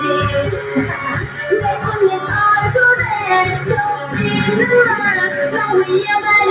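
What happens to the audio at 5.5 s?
At 5.5 s the sound is still under the noise suppressor applied to music or sounds, a fault that runs through the whole clip. A speech-tuned suppressor treats sustained tones and decaying tails as noise and pulls them down by around 5 dB, so the level pumps and thins. On a waveform the envelope dips after each onset; on a spectrogram the tails fade in patches, all below the 4 kHz ceiling of the G.711 mu-law call path.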